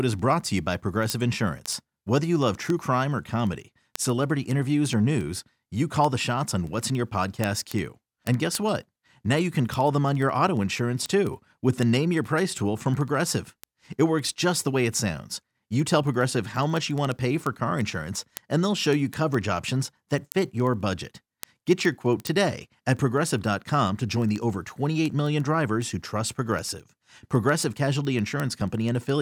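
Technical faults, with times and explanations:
0.12 to 29.16 s, word clock ticks: sharp ticks repeat about every 70 ms across the speech, roughly 400 of them, some louder than others. The receiving device runs on its own clock, about 300 ppm off the sender's, so each time the two slip a full sample, one sample is dropped or repeated and a few neighbours are misread. On a spectrogram this shows as thin vertical broadband lines at even spacing. In the waveform it appears as tiny single-sample steps or spikes.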